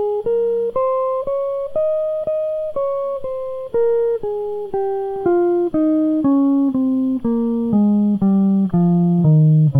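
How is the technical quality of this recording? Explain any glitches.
The technical quality of the music recording is good, and there are no glitches to explain.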